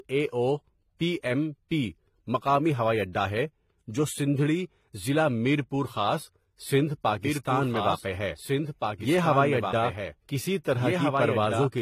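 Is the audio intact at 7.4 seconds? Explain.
No. From 7.25 s to the end, just after "ضلع میرپور خاص سندھ", a doubled audio track appears, likely a second copy about two seconds late and roughly 5 dB quieter, showing as an abrupt-onset repeated waveform. Transcoding between lossy codecs also applies here, likely HE-AAC into AAC-LC: smeared, warbly detail, with the spectrogram empty above 14.9 kHz.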